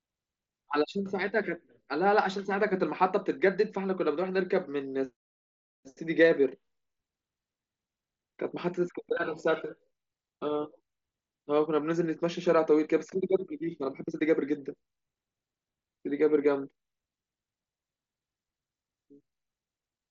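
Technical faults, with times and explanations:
No technical faults detected.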